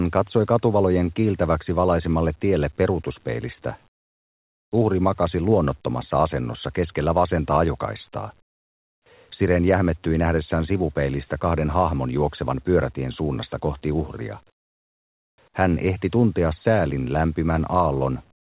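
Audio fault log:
3.88–4.72 s, 8.42–9.06 s, 14.5–15.38 s, comfort noise in place of the background: sending likely paused during silence, and the receiver filled each gap with synthetic noise, so the real background drops to a steady, featureless hiss about 15, 24 and 18 dB quieter.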